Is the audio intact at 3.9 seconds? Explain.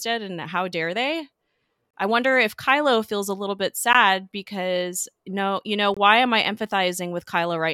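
No. At 3.93 s there is a gap between stream segments. Right after "feels a little bit", the speech drops into a hole of about 15 ms, then resumes with "because no you know". The time stamps of two consecutive segments, each 2.0 s long, leave a short gap. The player fills that gap with silence. The hole has hard edges, so it sounds like a brief dropout. No speech is lost. The timeline is simply stretched by that gap.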